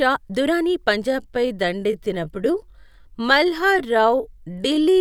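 From 1.0 s to the end, the speech abruptly slows to about 0.71 times its pace while the pitch holds steady, so it drags. This time-stretched section is likely software lengthening the audio by repeating short fragments rather than resampling it.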